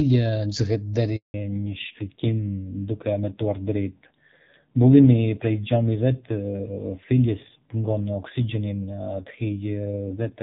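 At 1.16 s the speech drops out in a handover gap lasting 180 ms, to 1.34 s, as the call is moved from one network to another and no frames arrive during the switch. The sound fades within a few tens of milliseconds rather than cutting with a click, and the silence is clean, with no repeated or smeared fragments. That distinguishes it from packet loss with concealment, which fills gaps with stretched or buzzy copies of the preceding sound.

From 1.34 s to the end the call falls back to narrowband. Before the gap the HD Voice path carries speech with its upper band intact and only light coding roughness. After it, nothing is present above 4 kHz, so sibilants lose their hiss and the voice turns dull and rasping. The added roughness points to a low-rate narrowband codec. Because the change is abrupt and coincides with the handover, it reads as a codec switch rather than a gradual filter or a bandwidth limit on the recording chain.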